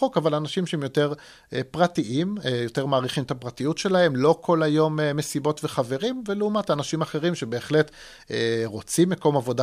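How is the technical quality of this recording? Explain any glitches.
Nothing in the speech catches the ear as a glitch, so there's really nothing technical to flag here.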